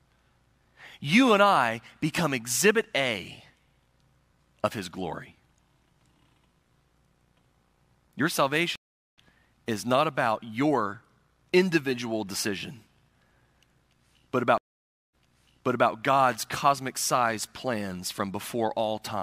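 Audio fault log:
8.76–9.18 s stream reconnect: the connection dropped for 0.41 s of silence, then a fresh decoder picked up roughly 0.4 s further on, skipping ahead before "is not about your".
14.58–15.90 s stream reconnect: 0.56 s of silence, then playback resumes 0.77 s earlier because the server resent a burst, so the restarted decoder repeats that stretch.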